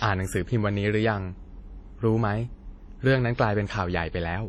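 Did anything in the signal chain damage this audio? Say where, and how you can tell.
Yes, the damage sits at the codec stage and runs through the whole speech clip. The sound rings and smears, with a washy hiss that swells and fades with the speech, and nothing is heard above 16.6 kHz. This is likely WMA compression: the transform encoder's long blocks spread quantisation noise over tens of milliseconds around each sound, and weak spectral lines are zeroed. The heavy damage fits a low bitrate, around 32 kbps.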